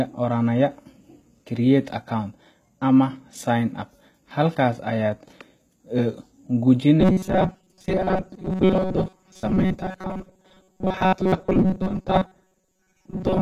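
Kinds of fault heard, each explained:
HE-AAC compression: The speech likely passed through HE-AAC at a low bitrate, around 20 kbps. Only the lower spectrum is truly coded. The treble is rebuilt from copied lower bands, so its harmonics don't match. The damage is plainly audible.
Robotic sound from repeated short buffers: From 7.0 s to the end, the speech turns into a rigid, metallic buzz at 188 Hz. Slices about 5.3 ms long are replayed while real audio is skipped. That likely comes from audio arriving too seldom. Most of this stretch is affected.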